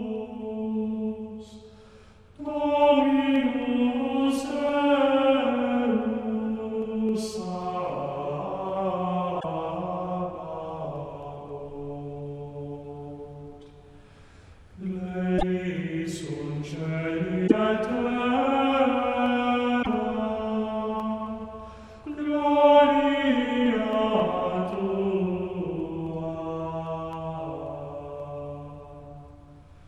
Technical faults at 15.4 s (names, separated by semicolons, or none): damaged data in a compressed stream